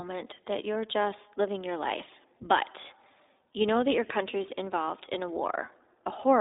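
From start to finish the speech sounds boxed-in and slightly rough, with a buzzy, synthetic edge that is plainly audible. There is no low bass below about 250 Hz and nothing above 3.8 kHz. This is iLBC codec coloration: a narrowband VoIP coder rebuilds each 20 ms frame's excitation independently, which fits its 15.2 kbps mode, discarding fine detail and everything above the telephone band.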